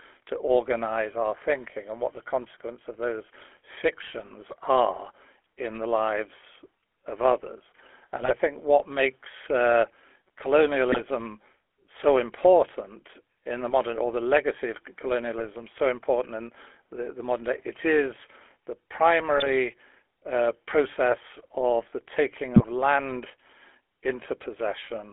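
Speech passed through the GSM full-rate codec, which fits a 13 kbps rate, limits the band to roughly 300 Hz to 3.4 kHz and leaves a constant buzzy, gravelly roughness throughout. Bursts of GSM bit errors corrupted the decoder's filter, pitch and gain values at 8.21 to 8.37, 10.92 to 11.02, 15.38 to 15.47, 19.36 to 19.49 and 22.56 to 22.65 s, causing brief squawks, pops and gargling.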